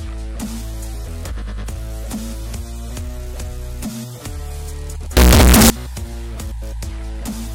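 From 5.17 to 5.70 s the audio suddenly turns into loud, harsh distortion, with soft and strong moments coming through at the same level. That's the sound of signed and unsigned mixed up, likely. The top bit of each sample gets flipped, so every zero crossing turns into a jump across the whole range. The character fits 16-bit samples. It lasts about half a second before the sound returns to its normal form.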